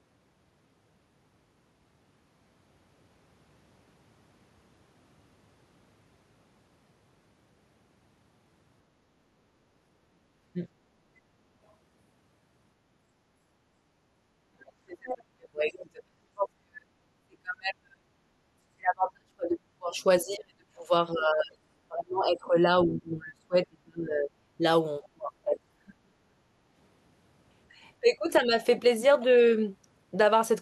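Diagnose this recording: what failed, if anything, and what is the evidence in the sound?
Speech suppressed in double talk, in call processing. The voice dips hard or cuts out in pieces at 14.49–18.28, 18.71–21.53, 21.88–24.62, 25.0–26.35 and 28.01–28.54 s, dropping by as much as 40 dB, with the last one much milder. The likely cause is an echo canceller that couldn't separate the talker from loudspeaker echo while both sides spoke, so it turned everything down.

The other side's voice is leaking through, also in call processing. It shows up as two short scraps at 15.09 and 15.72 s, each about 60 ms. The first is fairly prominent and the second is faint. That's likely loudspeaker echo the canceller failed to strip from the microphone signal.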